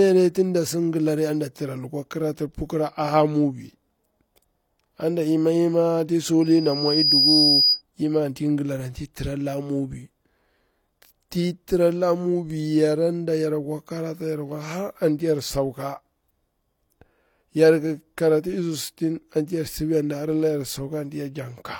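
From 6.41 to 7.82 s, loudspeaker feedback squeal swells in. The microphone re-amplifies its own loudspeaker at 4.9 kHz. That tone grows over most of a second, ending louder than the speech.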